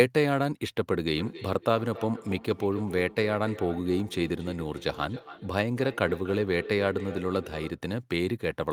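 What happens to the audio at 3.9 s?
At 3.9 s the speech is caught in a feedback echo between two devices, running from 1.16 s to 7.84 s. A second device in the same room plays back this microphone's signal, the microphone picks it up again, and its own echo canceller cannot remove sound it did not play. Each word returns roughly every 300 ms as a thinner, ringing copy, peaking about 12 dB below the direct speech.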